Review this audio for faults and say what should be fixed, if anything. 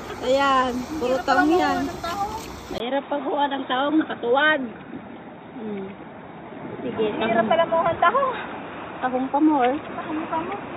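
Input switched to a poorer device, from 2.78 s to the end: after a 20 ms gap the sound turns dull and boxy, with nothing above 3.8 kHz. The level stays about the same, but a faint new noise floor appears, well below the signal. This is likely a mid-recording hand-off to a narrower-band input, such as another microphone or a headset's call profile, which carries its own tone and background noise. To prevent it, lock the recording input to the intended device and disable automatic device switching before capture.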